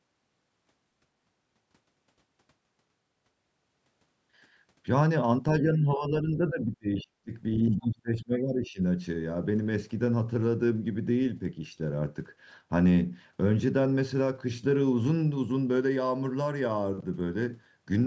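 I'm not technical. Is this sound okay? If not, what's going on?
No. Around two stretches, the talker's voice gets pushed down while someone else is also talking. This is speech suppressed in double talk. From 5.61 to 7.32 s, and again from 7.73 to 8.8 s, the voice sinks sharply, much quieter than the speech around it. A weak connection would garble or break up the sound. Here the voice is simply turned down, and only while two people speak at once. This is likely a call's echo cancelling that couldn't tell the talker apart from the other side's voice, so it turned both down.

There are also short traces of the other side's voice leaking through: a very faint scrap at 7.0 to 7.04 s, then a clearer bit from 7.55 to 7.87 s. This likely comes from the talker's device playing the other person on a speaker, and the microphone picking some of it back up. It isn't background noise or a room echo of the talker. 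It is a second, separate voice.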